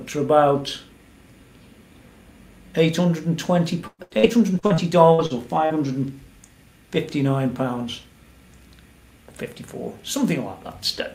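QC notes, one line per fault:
3.87 to 5.73 s, repeated packet loss (robotic sound): across this stretch the audio breaks up into nine short holes, the longest about 112 ms. Each is patched by stretching the preceding sound, so about a quarter of the span is synthetic fill, giving a choppy, robotic texture. Unlike a single dropout or one concealed gap, the holes keep recurring in quick succession, and unlike steady codec artefacts the damage is confined to this window.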